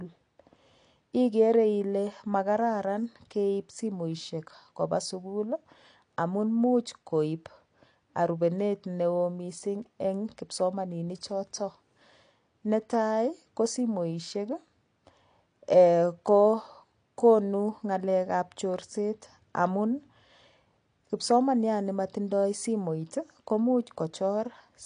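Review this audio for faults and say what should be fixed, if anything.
The audio has likely passed through AAC compression at a low bitrate. The encoder had too few bits per frame, so it dropped everything above about 9.8 kHz and coarsely quantised what remained, which fits AAC-LC at around 32 kbps. Across the whole speech clip this leaves the sound dull and band-limited, with holes in the spectrum that give sibilants a fizzy, smeared edge and sustained sounds a warble. Encoding from the original at a higher bitrate, or keeping an uncompressed master, prevents this.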